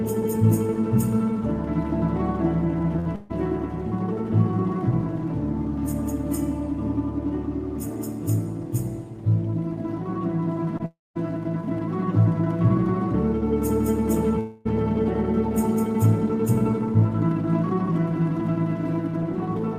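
A burst of packet loss hits the audio twice, at 2.99 to 3.07 s and 3.15 to 3.31 s, with about 60 ms and 140 ms continued as a fading buzz or hiss and then skipped. Unlike a dropout, the second gap does not fall into silence. A short concealed packet loss at 10.77 to 10.82 s fills only about 20 ms, heard as a brief smear rather than a held tone. Right after it, from 10.86 to 11.17 s, the sound stretches and fades, then goes silent for about 200 ms before resuming with roughly 300 ms missing. From 14.39 to 14.67 s it smears and fades for about 260 ms without reaching silence. Both are likely long network dropouts, longer than the bursts.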